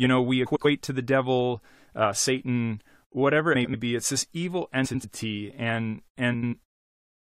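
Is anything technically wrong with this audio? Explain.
Yes. Frames out of order occur at 0.46–0.66 s (after "know we", before "to the devil uh"), 3.55–3.75 s, 4.85–5.05 s (after "this evil") and 6.34–6.54 s. Each time, two adjacent blocks of about 93 ms (consistent with runs of four frames) play swapped, giving a brief garbled flutter. On a spectrogram, formant tracks jump discontinuously. The waveform shows abrupt steps at three boundaries, and no time is lost.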